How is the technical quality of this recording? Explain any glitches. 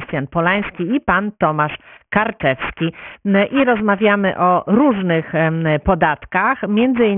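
The recording has one clear technical fault, and it runs through the entire clip.

Aliasing is present throughout. The speech appears to have been resampled down to a much lower rate, which fits a drop from 44.1 kHz to 6 kHz, without a low-pass filter first. Everything above the new 3 kHz limit folded back below it, landing on frequencies unrelated to the original. Sibilants and breathy consonants come out gritty and metallic, with the folded energy sitting roughly 15 dB under the speech and packed hard against the 3 kHz band edge.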